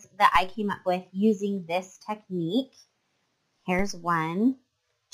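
At 0.36 s and again at 3.79 s, the waveform's zero line jumps suddenly by about -24 dBFS, a DC step, as if an offset were switched into the signal path. Each jump is heard as a low thump while the sound carries on unchanged. The offset then drains away through a roughly 2 Hz high-pass, so the waveform's baseline leaps and curves slowly back. On a spectrogram, each step shows as a brief broadband vertical line with energy concentrated at the lowest frequencies.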